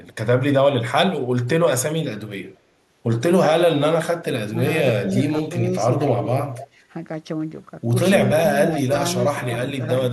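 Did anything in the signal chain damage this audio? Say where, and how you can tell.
Yes, the call processing damaged it. Speech suppressed in double talk hits at 4.50 to 4.57 s and 8.70 to 8.95 s, with dips of roughly 10 dB. That's likely the echo canceller mistaking both sides talking at once for echo and ducking everything.

Echo leak shows up at 5.05 to 5.49 s, 6.53 to 6.68 s, 8.65 to 8.81 s and 9.84 to 9.88 s. It's a copy of the speech trailing about 233 ms behind, sitting around 10 to 30 dB down, likely a far-end loudspeaker echo the canceller didn't fully remove.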